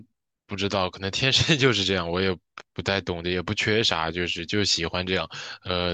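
No dropouts, glitches, distortion or other technical faults can be heard anywhere in this speech recording.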